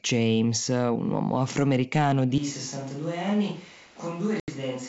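At 2.38 s the speech turns roomy and hollow, thinner in the bass and about 10 dB quieter, with room noise sitting only about 25 dB below it, through to the end. This is likely a switch to a distant microphone, with the close microphone's feed dropped.

From 4.40 to 4.50 s there is packet loss on an ADPCM call: a hard-edged 80 ms gap, around four packets, filled with silence. The decoder's predictor and step size lose track of the sender's, so the speech resumes slightly distorted before settling. The wideband G.722 coding itself does only faint damage, a light hiss in its upper band.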